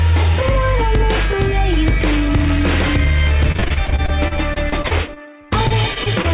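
Choppy sound from 3.52 to 6.26 s comes from repeated packet loss: a couple of dozen gaps, none longer than 28 ms, each patched by extending the previous sound.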